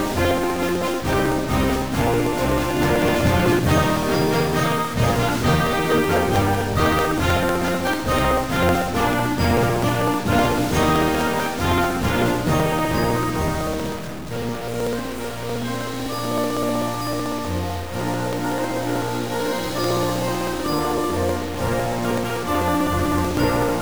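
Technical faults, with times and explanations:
Throughout, stuck bit: grainy noise or buzzy distortion covers the sound, and quiet gaps fill with noise. The likely cause is a data bit stuck at one value.
0.06 to 23.75 s, periodic USB or driver dropouts: regular ticks every 0.063 s. About 1 ms of audio is skipped each time the bus stalls.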